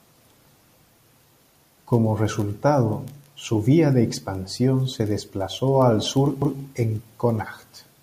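Speech recording with a CD skip at 6.42 s: a tiny tick, a mute of a couple of milliseconds, then the sound picks up from another point on the disc, as the laser jumped tracks.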